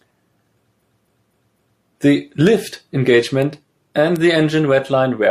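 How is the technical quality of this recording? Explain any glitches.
The recording has two kinds of glitch, a stutter early on and a few stray ticks later.

From 0.79 to 1.81 s there are repeated frames. A 256 ms chunk of compressed audio plays over again, four extra times, so the same fragment of speech loops. It stretches the clip by about 1.02 s.

There are bit error spikes at 2.47, 3.42 and 4.16 s. Each is a single sharp, broadband tick unrelated to the speech, where a flipped bit made the sample value jump and snap back. The first one seems a touch wider, spanning a few samples.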